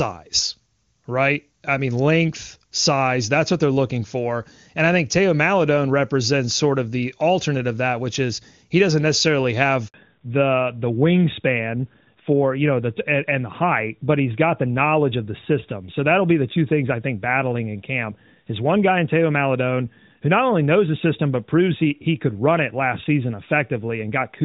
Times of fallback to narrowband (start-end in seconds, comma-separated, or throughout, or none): 9.94-24.45